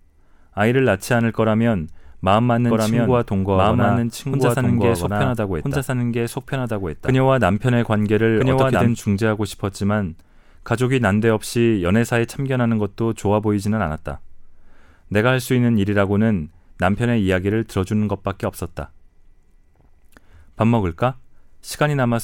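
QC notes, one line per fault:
2.68–8.92 s: doubled audio track, an equally loud dry copy trailing about one and a half seconds behind, likely from a second, slower capture path.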